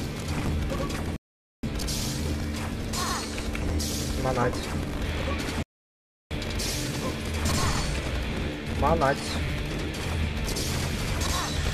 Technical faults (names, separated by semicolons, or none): rebuffering stall